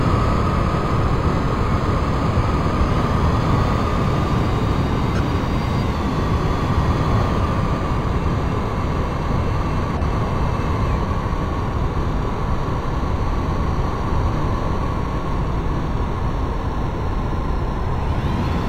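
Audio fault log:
No faults are heard anywhere in this clip. Nothing in the audio needs to be logged.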